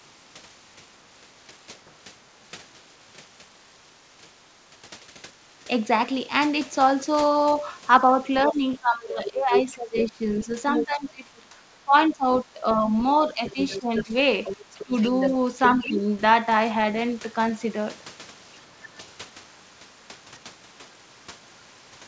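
Speech suppressed in double talk runs from 8.45 to 16.03 s. The talker's level dips repeatedly, by up to about 15 dB and for roughly four seconds in total. This is likely because the echo canceller, faced with both sides at once, pulled down the near voice along with the echo.

The other side's voice leaking through overlaps that stretch. It is heard at 9.26–9.76 s at roughly the talker's own level, at 10.41–11.4 s about 5 dB below, as a faint scrap at 12.32–12.37 s about 20 dB down, and at 13.45–16.18 s about 5 dB under. The likely cause is loudspeaker pickup that the canceller left in the microphone signal.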